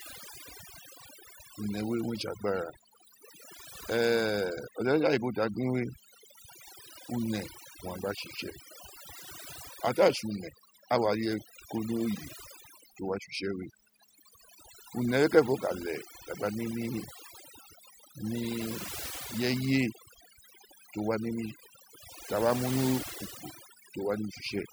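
Throughout the speech, overdone noise removal is audible. Bands near the noise floor are cut hard. The background sparkles.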